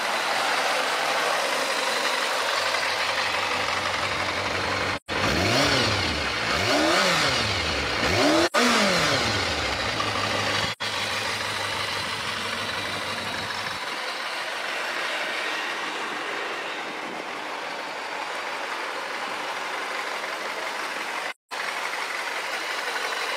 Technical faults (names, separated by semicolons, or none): AAC frame loss with muting